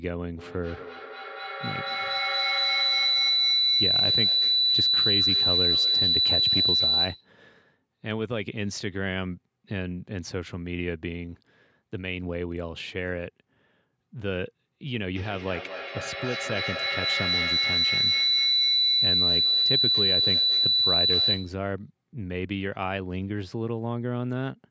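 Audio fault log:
0.39–7.44 s and 15.16–21.72 s, feedback howl: two devices sharing a room and call re-amplify each other, so repeats swell instead of decaying, narrowing to a tone around 4 kHz, pulsing roughly five times a second, peaking about 7 dB above the speech. Unlike plain echo, it grows rather than fades.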